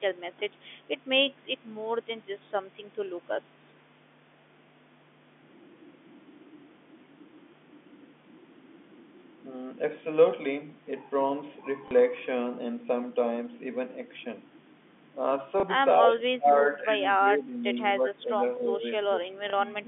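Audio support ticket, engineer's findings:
Echo leak, 0.00–1.62 s, 2.92–3.45 s, 4.58–5.21 s, 6.45–6.89 s. Faint delayed copy of the audio trailing by 258 ms, about 35 dB below the main signal (about 40 dB at 4.58 s). Likely cause: far-end loudspeaker pickup not fully removed by that side's echo canceller, with the residue returned down the line. Constant delay points to a single acoustic path.

Packet loss with last packet repeated, 11.88 s, 15.60 s, 19.50 s. Brief blip, 30 ms each. Fits a single lost 30 ms packet each time. The receiver concealed each gap by replaying the previous packet, which seldom lines up with the pitch, so the splice shows as a small blip within the G.711 telephone band.

Speech suppressed in double talk, 16.0 s to end of clip. The near talker dips, roughly 20 dB at the deepest, totalling about 3 s of attenuation. Likely cause: echo canceller unable to separate local talk from loudspeaker echo while both sides spoke, so it ducked the outgoing path. 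The packet-loss blip at 19.50 s falls inside this stretch.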